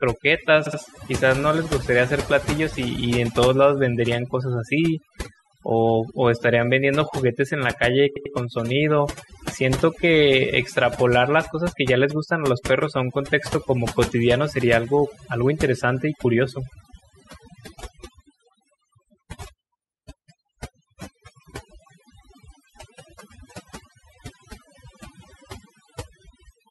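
Overdone noise removal runs through the whole clip. A noise reduction stage set far too aggressively has pulled individual frequency bands down to almost nothing wherever they sat close to its noise estimate. The pauses fall to near silence scattered with twinkling specks, and the quieter components of the speech were cut along with the noise.

Repeated frames first appear at 0.65 s, running to 0.79 s: a 69.7 ms block of the encoded stream plays two extra times, which fits a run of about three frames. This produces a quick stutter and adds 139 ms to the audio. At 8.15 to 8.34 s the same fault recurs with a longer 92.9 ms block, again replayed twice, which points to roughly four frames. That stutter adds 186 ms.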